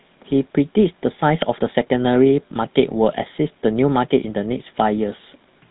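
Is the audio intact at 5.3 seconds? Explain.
No. The speech at 5.3 s, like the rest of the clip, has passed through the GSM full-rate codec, which rebuilds the voice from a vocal-tract model excited by sparse regular pulses at what fits a 13 kbps rate. That leaves a plainly audible buzzy, gravelly roughness, with nothing above 3.9 kHz.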